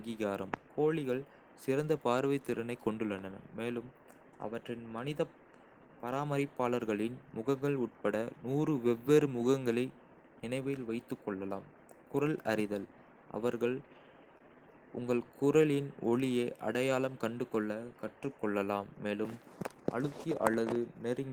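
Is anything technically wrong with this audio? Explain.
Yes, there are three separate timing faults in this speech.

From 13.93 to 14.43 s the speech catches and drags four times in half a second, a stutter from repeated stalls. The jitter buffer kept running dry, and the receiver stretched the last sound across each gap, 50 ms in all, the longest 26 ms. Nothing is lost.

Between 15.62 and 16.58 s the speech slows to 94% of its pace at unchanged pitch, sounding drawn out. This is a jitter buffer slow-down: the receiver repeated single pitch periods over and over, adding 64 ms to rebuild its reserve.

From 18.91 to 19.47 s the speech runs hurried, at 109% of normal speed with pitch unchanged. This jitter buffer speed-up happened because the buffer held too much audio, so the receiver cut short pitch-period pieces, about 50 ms in total, to reduce delay.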